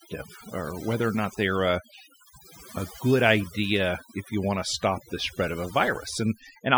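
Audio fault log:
Throughout: overdone noise removal. Bands near the noise estimate are cut hard, taking quiet speech detail with them and leaving the background breaking into twinkling, warbling specks.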